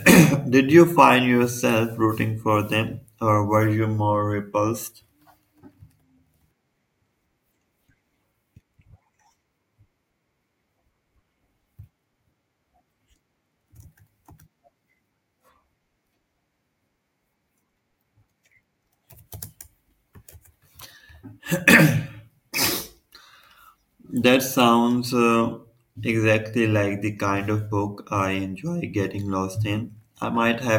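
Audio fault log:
No faults heard anywhere in the speech recording.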